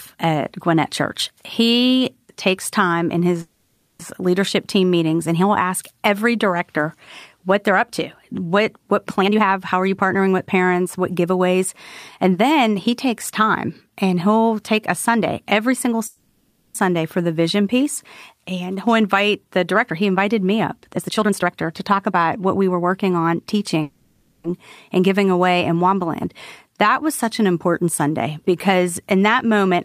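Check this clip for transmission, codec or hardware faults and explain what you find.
The speech has two kinds of transmission fault: three call audio freezes and four stretches of jitter buffer speed-up.

Call audio freezes occur at 3.41 to 4.01 s, after "takes time in"; at 16.07 to 16.77 s, after "every single"; and at 23.82 to 24.46 s. The likely cause is delayed packets draining the jitter buffer. The last sound continues as a fading buzz for about 0.6 to 0.7 s. The speech then resumes where it stopped, before "leadership team meetings and" and "for the", with nothing lost.

Jitter buffer speed-up runs at 9.21 to 13.90 s (112%), 18.75 to 19.58 s (107%), 20.95 to 23.78 s (119%, after "invited me up") and 29.14 to 29.75 s (106%). The receiver cut short pitch-period pieces to reduce excess delay, about half a second in the longest stretches. The speech sounds hurried at unchanged pitch.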